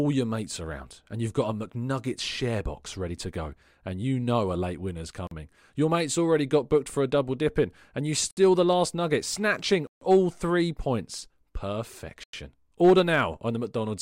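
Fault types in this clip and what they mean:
Bluetooth stall: The speech drops to dead silence four times and resumes where it stopped, after "know a late winner's", "double dipping and you", "the last nugget snatching", and near 12.24 s. The gaps last 42, 62, 142 and 98 ms. Delayed wireless packets likely let the playback buffer run empty.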